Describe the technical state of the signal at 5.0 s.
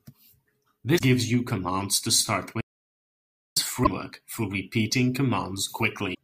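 At 5.0 s the speech signal is intact, with no audible fault.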